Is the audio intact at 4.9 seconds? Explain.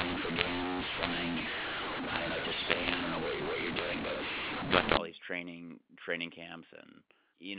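No. At 4.9 s the speech is harsh and distorted, with levels scrambled and pauses filled with noise. This is the mu-law and A-law mix-up running from 0.0 to 4.98 s: telephone audio coded as mu-law is decoded as A-law, misreading every sample.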